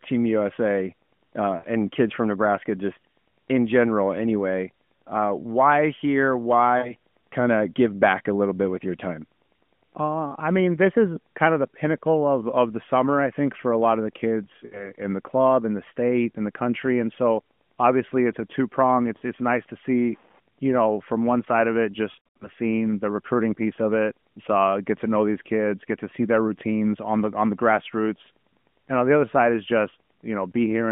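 Lost AMR speech frames cause short gaps at 1.58 s, 6.78 s after "why here", 14.66 s after "lot of the kids", 19.18 s after "it's a two prong", and 22.12 to 22.48 s. Radio errors corrupted frames, so the decoder repeated the last good settings at falling gain. The first four gaps are 40 to 60 ms long. In each one the sound is drawn out and fades as the gain falls. The last cluster loses about 200 ms across 280 ms, so the sound is drawn out and fades, and the voice comes back weak or rough for a moment.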